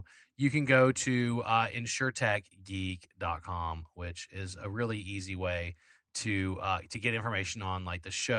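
Nothing stood out on listening to the speech recording.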